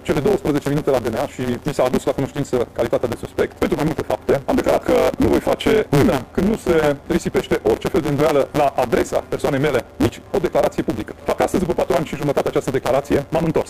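A steady buzz at about 138 Hz sits on the audio for its whole length, and everything runs roughly 1.6 times too fast while keeping about its normal pitch. That's a block size mismatch (truncated): blocks likely around 512 samples are written, and the reader drops each block's tail.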